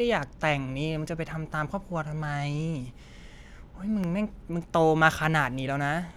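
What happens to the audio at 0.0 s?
Nothing goes wrong at 0.0 s; the audio plays intact at that moment.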